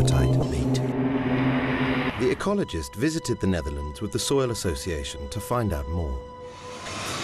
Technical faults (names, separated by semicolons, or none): damaged data in a compressed stream